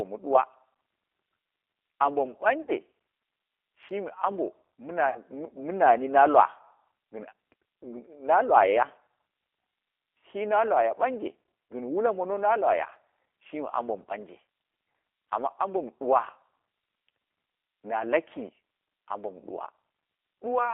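Right from the start the whole clip carries the sound of the G.729 codec, and the damage is plainly audible. The speech sits in a narrow phone band of roughly 300 Hz to 3.4 kHz, which fits the 8 kbit/s G.729A coder. That codec rebuilds each short frame from a vocal tract filter, a pitch estimate and a handful of pulses. The result is a voice that stays intelligible but comes across slightly rough and synthetic.

Then there are two spots where VoIP packet loss was concealed by the speech codec. The first runs from about 2.62 to 2.72 s and the second from about 5.09 to 5.19 s. In each one about 60 ms of audio went missing, which fits two lost packets. The decoder bridged each gap by stretching the last pitch and filter while fading the gain. You hear a short buzzy or noisy smear that dies away, and because each frame builds on the one before, it stays weak or distorted just afterwards.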